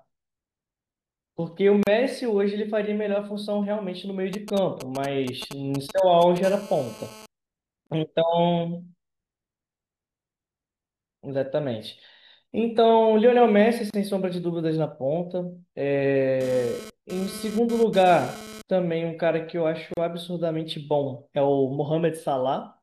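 At 1.83 s a 37 ms silence cuts into the speech, a gap at a join of encoded pieces; untrimmed encoder delay and padding recur every 6 s. From 4.33 to 6.38 s, GSM signalling bursts from a nearby 2G phone produce a galloping ticking and 217 Hz buzz, roughly 10 dB below the speech. A steady GSM phone buzz at 217 Hz follows from 6.43 to 7.26 s, about 19 dB down. Similar 34 ms gaps occur at 7.87, 13.90 and 19.94 s, and from 16.41 to 18.62 s the buzz returns intermittently, about 16 dB down, as during data transfer.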